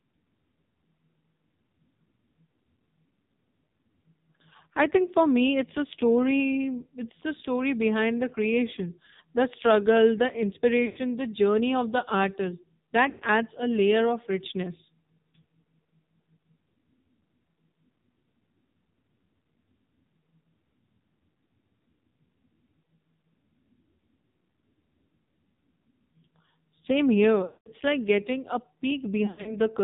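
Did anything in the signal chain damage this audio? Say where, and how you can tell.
Yes. At the codec stage, an AMR narrowband mobile codec band-limits the speech to 4 kHz and makes it buzzy and synthetic throughout, which fits a low-rate mode near 6 kbps.

In the network, lost AMR speech frames smear then fade the sound at 10.86–10.99, 13.10–13.25, 27.46–27.69 and 29.26–29.57 s, as the decoder stretched its last good parameters.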